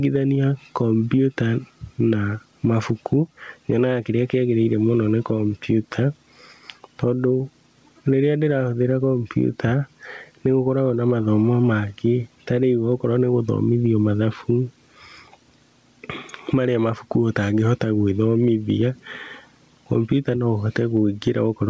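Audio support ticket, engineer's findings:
Gain pumping, whole clip: level swing around 10 dB, dynamics squashed flat. Likely input gain set far too high, with a fast limiter/compressor clamping down on peaks and releasing between them. Top end stops near 8 kHz, consistent with a wideband G.722 call path.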